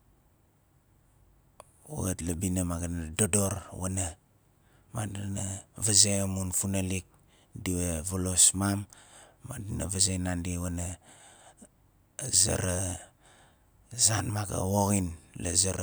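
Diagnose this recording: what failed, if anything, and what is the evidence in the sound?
Nothing in the chain from capture to playback shows a failure, and the speech signal stays continuous and stable throughout with no audible disturbance at any stage.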